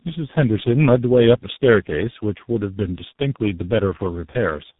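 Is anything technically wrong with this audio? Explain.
Yes. Throughout, the speech shows tandem speech coding: it passed through about three speech codecs in a row, each re-encoding the previous one's damage, which leaves it rough, muffled and warbly, with nothing above 3.8 kHz.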